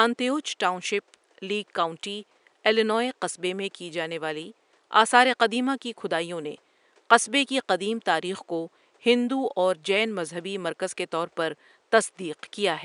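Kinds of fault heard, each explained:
No technical faults are heard.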